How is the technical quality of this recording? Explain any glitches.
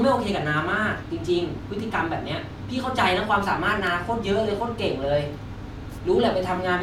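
There are two small glitches in this speech. At 1.80 s and again at 3.87 s you get a quick jump where the sound skips forward, most likely a dropped buffer (overrun): the samples weren't read in time, so a millisecond or two, then a few milliseconds, went missing and the edges butted together.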